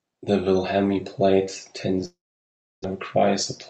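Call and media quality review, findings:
Long network dropout, 2.05–2.86 s. Speech smears into a fading buzz, then 0.67 s of silence. It resumes with 0.6 s missing. Likely cause is network packet loss.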